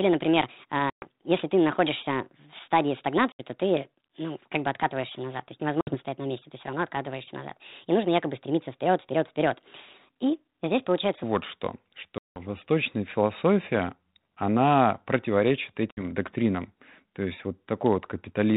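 From the start to 11.23 s the audio plays 1.42 times too fast, likely from playback against the wrong clock, so the speech is hurried and raised by about seven semitones, with speed and pitch shifted together.

Packet loss on an ADPCM call hits at 0.9 s (120 ms lost), 3.32 s (70 ms), 5.81 s (60 ms), 12.18 s (180 ms) and 15.91 s (60 ms). Each loss leaves a hard-edged silent hole. When the audio resumes, the decoder's predictor and step size no longer match the sender's, so the speech comes back distorted until they realign, up to about 0.15 s after the audio returns. The band-limited telephone sound of the G.726 ADPCM coding, which points to 32 kbit/s, carries through the whole clip.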